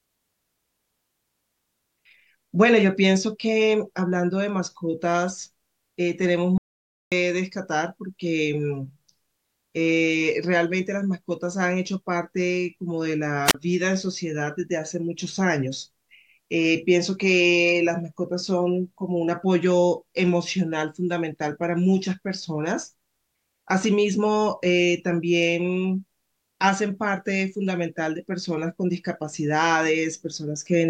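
At 6.58 s the speech cuts off abruptly. It returns at 7.12 s. That is an audio dropout to silence lasting about 540 ms. The gap is silent, with no room tone. The input was likely lost while recording continued. That stretch of speech is gone.

At 13.46 s there is a wireless microphone squelch dropout. The radio link faded. The receiver's squelch then muted the output for about 35 ms. A short burst of hiss comes before a near-silent hole. The speech resumes by 13.55 s.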